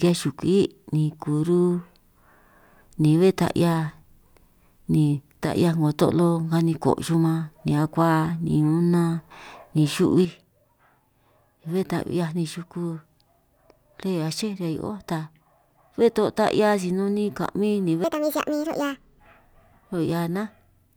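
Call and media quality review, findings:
Level drop, 5.46 to 5.56 s. Brief, about 6 dB down, abrupt edges. Likely one channel dropping out before mono downmix. Shared content halves in level. Content unique to lost side vanishes.

Same symptom from 10.25 s to end of clip. About 6 dB lower, sudden onset, no recovery. Likely the same channel dropout, sustained. Mono sum carries only one side. Check stereo input path, cabling, channel mapping.

Speed error, 18.04 to 19.20 s. Speech runs 1.66 times fast, pitch up nearly an octave, high and hurried. Likely a section at the wrong speed, clock mismatch in playback or edit. Speed and pitch shift together, then snap back.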